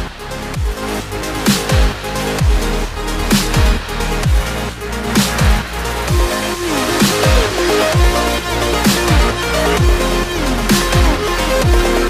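No technical faults can be heard anywhere in the clip.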